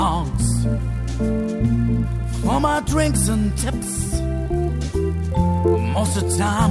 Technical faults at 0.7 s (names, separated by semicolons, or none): resampler restarted on every block